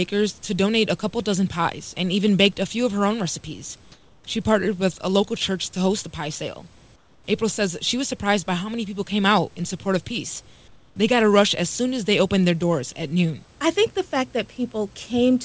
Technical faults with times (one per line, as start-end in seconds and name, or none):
3.92-4.24 comfort noise in place of the background
6.96-7.24 comfort noise in place of the background
10.68-10.96 comfort noise in place of the background